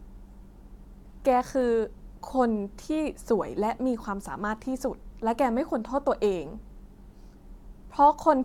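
Nothing in this recording trips any alarm, with no dropouts, clicks, glitches or other faults turning up anywhere along the way.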